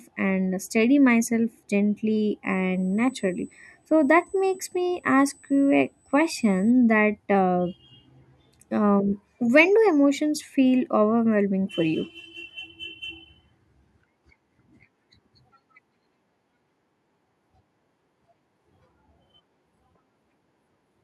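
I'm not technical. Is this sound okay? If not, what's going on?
No. Between about 2.51 and 6.71 seconds, just after "and steady myself gently," there is USB whine. The USB connection draws power in very fast, regular bursts, thousands of times a second, and some of that electrical noise leaks into the audio through the shared power or ground. You hear it as a thin, steady, high-pitched whine at 8 kHz, fixed in pitch and quiet compared with the speech, sitting behind it for about four seconds.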